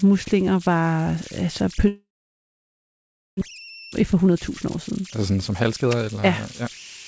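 Throughout the speech, converter idle tones appear as a tone near 3 kHz, about 18 dB below the signal. An undithered converter falls into repeating bit patterns, and on a spectrogram this shows as a thin horizontal line across the pauses, well inside the G.722 band that stops at 8 kHz.

From 1.88 to 3.43 s the sound is stretched into a fading buzz or hiss, then about 1.3 s of silence that looks flat on the waveform. This is likely a long network dropout, with roughly a second of audio never played.

From 3.51 to 7.05 s a jitter buffer speed-up plays the speech at 113%. It trims pitch periods to recover roughly half a second, so the spectrogram's harmonics keep their spacing while syllables are compressed.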